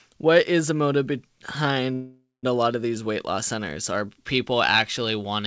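From 1.94 to 2.45 s there is a call audio freeze, most likely because packets stalled in transit and the receiver's jitter buffer ran dry. To cover the stall, the receiver stretches the last stretch of speech into a fading buzz or hiss lasting about half a second, the final 180 ms of it falling to silence. The speech then resumes exactly where it stopped, nothing lost but now running about half a second late, still band-limited to 8 kHz by the call codec.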